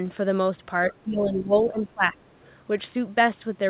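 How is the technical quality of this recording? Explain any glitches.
The recording has one clear glitch, a stretch where the speech is pushed down. The audio has nothing above 4 kHz, which fits a narrowband G.711-style call codec.

From 0.91 to 2.35 s, the speech dips in level by as much as around 15 dB, for about a second in total. This is likely speech suppressed in double talk: the echo canceller could not separate this talker from simultaneous far-end echo, so it attenuated both.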